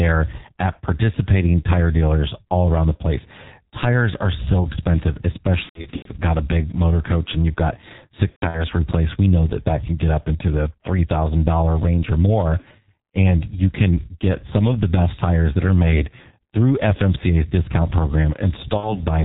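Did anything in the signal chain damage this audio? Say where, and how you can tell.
Yes. At the codec stage, G.723.1 at 6.3 kbit/s damages the whole clip heavily. The speech is muffled, with nothing above 4 kHz, hoarse, and has smeared consonants. That hoarse, blurred quality, not simple dullness, separates it from a plain low-pass filter or narrowband line.

At the network stage, VoIP packet loss concealed by the speech codec shows at 5.63–6.08 s, between "are so expensive" and "got a big motor", at 8.30–8.64 s after "coach and you've got", and at 18.77–19.02 s. The first two are scattered losses with runs up to 120 ms. The decoder stretches the last sound into a fading buzzy tone or coloured noise, muted from the third lost frame in a row, and the voice stays weak afterwards.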